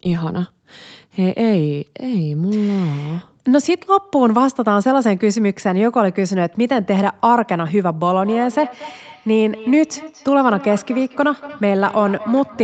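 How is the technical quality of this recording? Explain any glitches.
The recording has one fault: a feedback echo between two devices, running from 8.19 s to the end of the clip. Two devices in the same room were on the call, and one microphone picked up the other's loudspeaker. Each echo canceller removes only its own device's playback, so the speech came round again roughly every fifth of a second. The repeats sit about 17 dB below the speech and sound thinner and more ringing than the original. The whole clip stops at 8 kHz, as the call path carries nothing higher.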